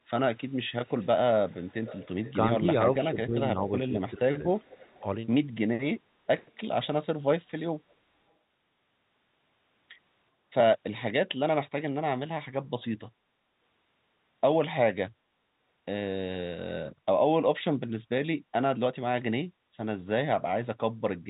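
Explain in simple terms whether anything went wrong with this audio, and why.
A faint, delayed copy of the speech trails the talker from 0.36 to 1.07 s, 1.49 to 2.33 s and 4.54 to 5.01 s, plus a tiny scrap at 7.91 to 7.95 s, arriving about 0.39 seconds late. This is an echo leak, likely from a speakerphone whose echo canceller let some of the played-back call slip back into the microphone.

Between 2.24 and 4.63 s the speech dips and thins in patches, adding up to about a second. This is speech suppressed in double talk. Both sides likely talked at once, and the echo canceller, unable to tell the real talker from the loudspeaker, turned everything down.

The room sound briefly drops out at 18.4 to 18.52 s and again at 19.53 to 19.76 s, then returns. This is background gated by the echo canceller. It clamped the microphone down while the loudspeaker played and let go a moment later.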